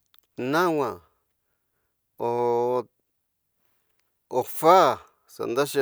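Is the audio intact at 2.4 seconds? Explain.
Yes, the speech at 2.4 seconds plays through intact, with no dropout, click, distortion or other audible fault at that moment.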